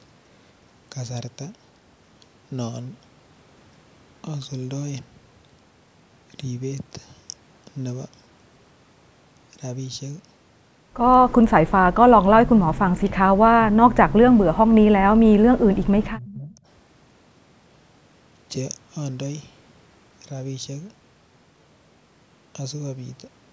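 Speech suppressed in double talk occurs from 11.41 to 11.61 s as a brief, near-total cut, then as dips of roughly 15 to 20 dB at 12.11–13.24, 13.54–14.47 and 15.66–16.66 s, likely an echo canceller mistaking the talker for loudspeaker echo.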